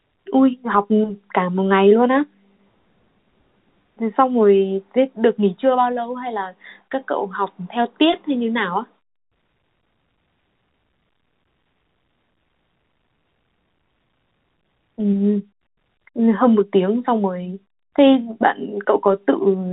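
Nothing here counts as a fault: the speech simply sits inside the usual telephone band, with the top end stopping around 4 kHz as you'd expect from G.711 telephone coding at its standard 64 kbps.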